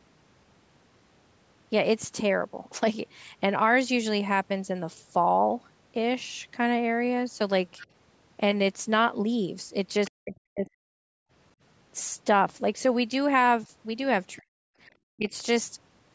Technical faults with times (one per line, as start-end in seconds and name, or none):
7.80-7.87 other side's voice leaking through
10.06-10.11 other side's voice leaking through
10.10-10.82 speech suppressed in double talk
11.10-11.31 background gated by the echo canceller
14.38-14.52 speech suppressed in double talk
15.15-15.34 speech suppressed in double talk